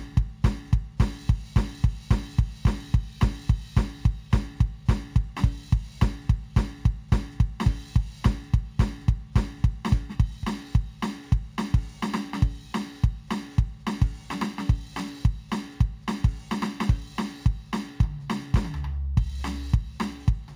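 Imaging from linear upsampling runs through the whole music clip. The rate was raised from 16 kHz to 44.1 kHz by straight-line interpolation, so the top of the original band sounds dulled, and a mirrored image between 8 kHz and 16 kHz, roughly 35 dB down, adds a faint metallic shimmer.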